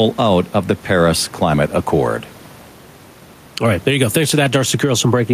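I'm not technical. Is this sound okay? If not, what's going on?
No. The recording has gain pumping throughout: the level is pulled down whenever the speech gets loud and comes back up after, so it keeps breathing up and down. The likely cause is the microphone level set too high, with an automatic limiter pulling it down on each loud moment.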